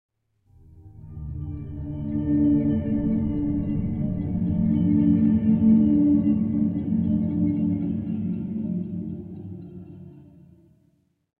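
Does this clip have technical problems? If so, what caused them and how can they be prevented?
No, this clip has no technical problems, so there is nothing to trace to a cause or prevent.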